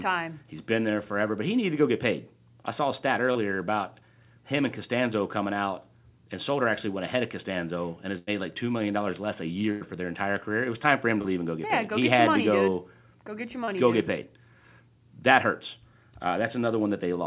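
At 3.32 to 3.38 s a brief smear interrupts the speech. This is short concealed packet loss: about 30 ms of audio never arrived in time, and the receiver filled the hole by extending the preceding sound for roughly the same span before blending back into the real signal.

At 8.18 to 8.30 s, just after "and has", the sound stretches into a held, fading tail, then picks up further on with about 90 ms gone. The same happens at 9.71 to 9.84 s. These are bursts of packet loss: several consecutive packets were lost, so the receiver continued the last sound for over 90 ms while turning it down, and the audio in between is simply missing.

Two more short concealed losses follow, each a quick wobble where about 30 ms was replaced by extrapolated sound. The first comes at 11.22 to 11.27 s, between "was time for him" and "leave and go get". The second comes at 13.64 to 13.70 s, right after "dude go get your".

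All of this sits on a call path with nothing above 4 kHz, which fits a G.711 A-law codec at 64 kbps.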